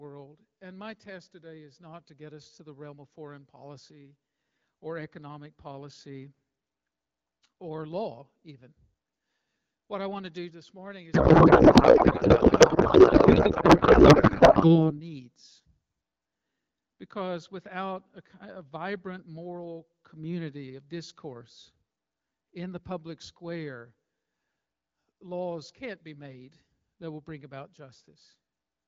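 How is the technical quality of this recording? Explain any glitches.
One fault stands out: a stretch of scrambled sound in the middle of the speech. The wideband AMR coding around it sounds clear, which fits a rate near 12.65 kbit/s.

Codec payload misread, from 11.13 to 14.93 s, right after "to do this morning": the speech turns into garbled noise and warble that barely tracks it. The decoder is reading octet-aligned AMR frames as if they were bandwidth-efficient, so every field lands in the wrong place. Unlike packet loss, there are no gaps or dropouts, just steady nonsense until the packing matches again.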